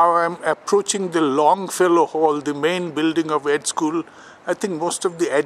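Nothing goes wrong anywhere in the clip, so there's no fault to point to at any moment.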